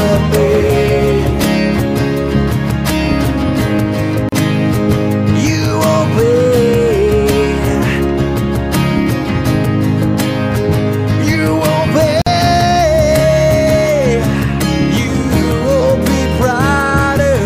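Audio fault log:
4.29–4.32 s and 12.22–12.27 s: gap at a join of encoded pieces. Silences of about 36 ms and 49 ms cut into continuous sound and then resume where it stopped. Separately encoded segments were joined with their encoder start delay and last-frame padding left untrimmed, leaving edges smeared by the codec.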